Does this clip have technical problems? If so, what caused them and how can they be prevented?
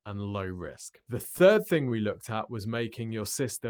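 Yes: repeated stalls (stutter) from 1.23 to 1.93 s, just before "looked at was". Packets arrived late, so the jitter buffer emptied five times and the receiver stretched the last sound, up to 16 ms each time, without losing audio. A larger adaptive jitter buffer or steadier network delivery would prevent it.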